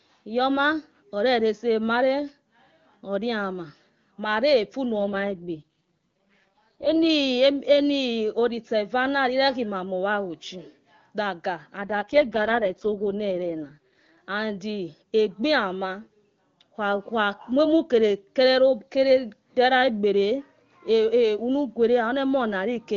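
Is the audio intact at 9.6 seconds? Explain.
Yes, the speech is intact at 9.6 seconds, with no fault at that moment.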